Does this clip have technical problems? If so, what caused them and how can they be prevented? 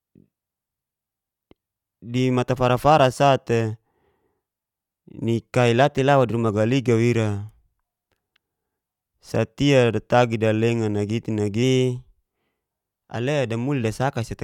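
Yes. Two drift correction steps, at 5.98–6.49 s and 11.63–12.17 s: speech runs 5.4% fast and about 91 cents sharp, then snaps back, likely from a clock-matching resampler draining its buffer in one jump. Prevent this by locking both devices to one clock or correcting drift gradually.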